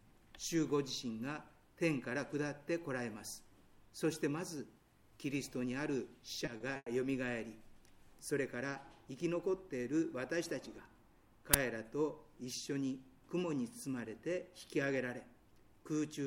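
At 6.45 s and again at 6.57 s the sound is briefly held and smeared, the first time by about 20 ms and the second by about 30 ms, with a faint buzzy edge. These are short stalls from a late packet: the jitter buffer ran dry, the receiver stretched the last sound, and then it picked up where it left off with nothing lost.

From 6.76 to 6.94 s the audio freezes into a decaying buzz for about 100 ms, then drops to about 30 ms of silence before resuming from the same point, about 100 ms later than before. This call audio freeze was likely caused by packets held up in transit, which left the jitter buffer empty.

At 11.54 s a sudden, loud burst of digital noise lasts about 12 ms, which fits a 512-sample buffer. This is an uninitialised buffer: a block was played before any audio had been written into it, so leftover memory contents came out as samples.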